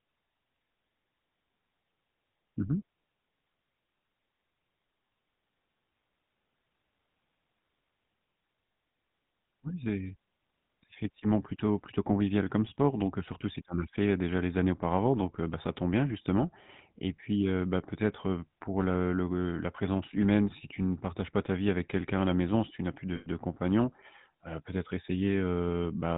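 Throughout, the speech passes through the GSM full-rate codec, which rebuilds it from a vocal-tract model and sparse pulses; the buzzy, gravelly roughness and nothing above 4 kHz fit its 13 kbps mode. From 23.16 to 23.28 s, lost GSM frames, about 100 ms or roughly five frames, are patched by repeating the last good frame, giving a brief rough, metallic ring.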